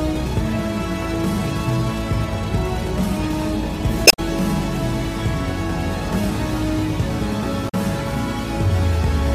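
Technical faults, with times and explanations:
4.04–4.19 s and 7.65–7.75 s, damaged data in a compressed stream: in each spot a run of bad bytes in the encoded file makes the decoder misread frames and lose sync while it hunts for the next valid frame header. What comes out is a brief chirp, squawk, click or short hole unrelated to the surrounding sound. On a spectrogram each shows as a short disturbed patch; the waveform has an abrupt discontinuity at both edges.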